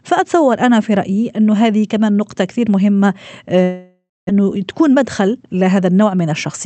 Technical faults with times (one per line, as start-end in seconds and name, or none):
3.63-4.31 long network dropout
4.87-5.44 jitter buffer speed-up